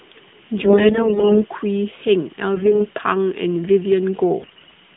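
AMR bit errors at 0.62–1.46 s, 2.54–2.87 s and 4.40–4.76 s: corrupted low-priority frame bits misplace pulses, turning speech hoarse and gargly, though milder mid-clip.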